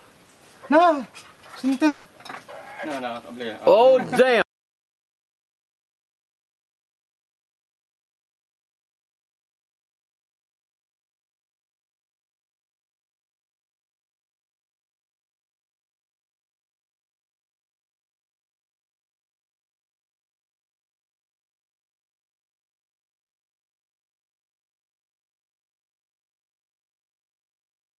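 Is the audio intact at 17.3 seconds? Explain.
Yes, the audio at 17.3 seconds is intact, with nothing there beyond the ordinary coding of the call path it passed through.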